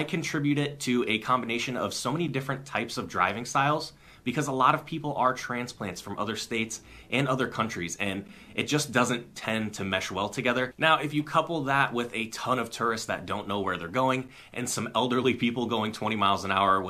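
At 2.28 s, 8.28 s and 14.28 s the sound drops out for brief, hard-edged silences, each a gap between stream segments. The holes last about 7.4, 11.5 and 8.0 ms and recur every 6 s, matching the segment length. Adjacent segment timestamps don't quite meet, so the player inserts silence rather than losing audio. On a waveform each appears as a flat silent notch with abrupt walls. A spectrogram shows a thin vertical blank band across all frequencies.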